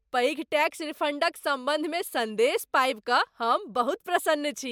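A short bit of speech, and nothing technically wrong turns up in it anywhere.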